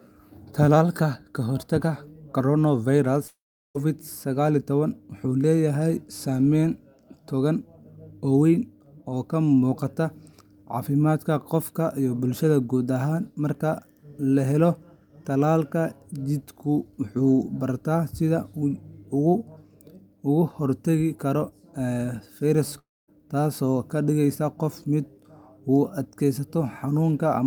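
A likely long network dropout occurs at 3.27 to 3.77 s, right after "ka hortagga coronavirus", and again at 22.79 to 23.10 s. In each gap the last sound is stretched into a fading buzzy hiss, then goes quiet. This lasts about 0.47 s with 0.38 s of it silent the first time, and about 0.29 s with 0.23 s silent the second time. The speech resumes further on with roughly 0.48 s and 0.30 s missing.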